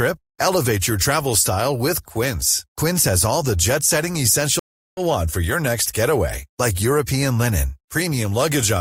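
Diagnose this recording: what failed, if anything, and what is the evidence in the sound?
The failure is at the network stage: a stream reconnect in this speech clip. From 4.59 s to 5.00 s the audio drops out, with about 0.38 s of silence. When sound returns it has jumped ahead by roughly 0.3 s, so a short stretch of the speech is simply missing. The connection broke, the player reconnected and started a fresh decoder partway through the stream, whose first frame fades in rather than continuing seamlessly.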